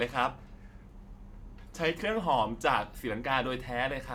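No technical faults can be heard anywhere in the recording.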